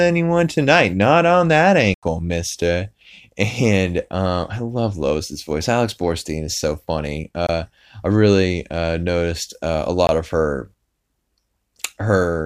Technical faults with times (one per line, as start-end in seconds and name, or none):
1.94-2.03 block of digital silence
7.47-7.49 block of digital silence
10.07-10.09 block of digital silence